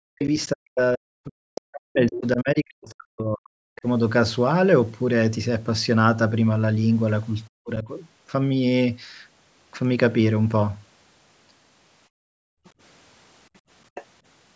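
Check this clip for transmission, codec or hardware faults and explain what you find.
Yes, there are faults. The clip shows three kinds, all pointing to an echo canceller on a call struggling with two people talking at once.

Speech suppressed in double talk occurs from 0.0 to 0.23 s, across most of 0.52 to 3.86 s, and from 7.48 to 7.88 s. The speech dips sharply, by as much as about 40 dB. This is likely the canceller, unable to separate the talker from loudspeaker echo, pulling everything down while both sides spoke.

The other side's voice leaking through appears as brief scraps at 1.55–1.61 s, 2.12–2.18 s, 12.64–12.70 s and 13.95–14.05 s. Most sit roughly 10 to 15 dB under the talker, and the 12.64 s scrap about 35 dB under. This is likely residual loudspeaker sound the canceller failed to remove from the microphone.

Background gated by the echo canceller runs from 12.08 to 12.64 s. 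The room sound falls away by about 39 dB for around half a second, then returns. The canceller clamped the microphone hard while the loudspeaker played and released it afterwards. The call's microphone processing, with nothing above 8 kHz, is the normal band limit of this path.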